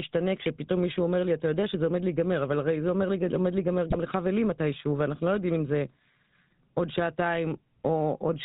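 Speech squeezed through the GSM full-rate codec: everything above 4 kHz is gone, and the voice has that buzzy, gravelly edge, pointing to a roughly 13 kbps coded path. GSM bit errors break in at 3.89 to 4.04 s and again at 6.51 to 6.53 s, corrupted decoder parameters throwing out squawks, pops and a gargled burst.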